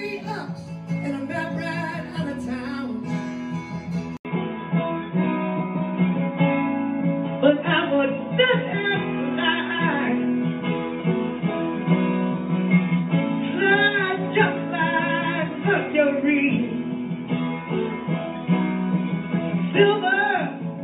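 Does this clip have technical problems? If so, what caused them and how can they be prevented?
Yes. At 4.17 s the recording most likely switched its input to a poorer device, and it stays on that device through to the end. A gap of about 80 ms marks the switch. From there on nothing above 3.8 kHz comes through, so the sound turns duller and boxier. The level shifts by about 5 dB, and a new noise floor sits roughly 40 dB below the signal. To prevent this, lock the recording input to one chosen device and turn off automatic switching to headsets or call profiles before recording.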